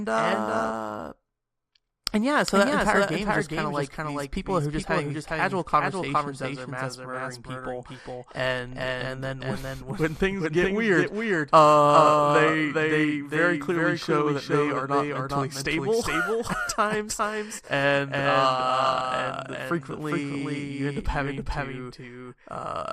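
From start to finish there's a doubled audio track: a second full-band copy of the speech trails the original by roughly 400 ms, a few dB quieter, with no room tail. It's likely a second capture path running late, or an edit leaving two offset copies.

Also running throughout is MP2 compression, and the damage is plainly audible. The top end sounds dull and shut off, with a gurgly, grainy texture as sub-bands drop in and out. That fits a likely MPEG Layer II encode at around 80 kbps, starved of bits.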